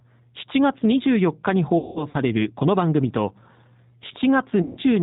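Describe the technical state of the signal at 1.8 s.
The speech smears into a fading buzzy tone or coloured noise from 1.78 to 2.17 s. This is VoIP packet loss concealed by the speech codec: about 210 ms went missing across 360 ms, the longest gap 180 ms, and the decoder stretched its last pitch and filter while ramping the gain down. Over this stretch, the G.729 codec also leaves the speech plainly rough, synthetic and band-limited below 4 kHz, because it rebuilds speech from a coarse model at 8 kbit/s.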